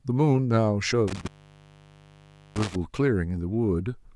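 A loose cable or plug opens between 1.08 and 2.76 s, an intermittent contact that drops the speech for about 1.28 s, with crackle at each edge and faint hiss in the gap.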